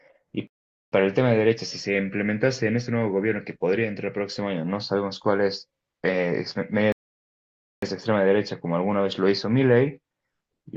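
At 0.47 s the speech drops into sudden silence and picks up again at 0.92 s exactly where it broke off, and the same happens from 6.92 to 7.82 s. Both are rebuffering stalls: the player used up its downloaded audio and paused until more arrived. Nothing is skipped; each gap simply adds dead time, about 0.45 s the first time and 0.90 s the second.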